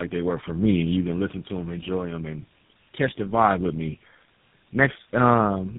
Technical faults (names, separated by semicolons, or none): tandem speech coding